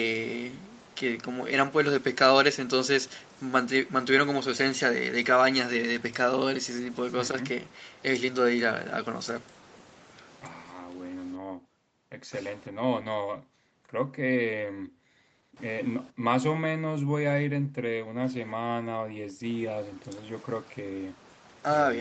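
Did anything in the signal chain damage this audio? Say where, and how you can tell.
No, nothing in the chain damaged this speech; it simply went through the usual call microphone processing and the call codec, so the top end stops at around 8 kHz, which is normal for that path.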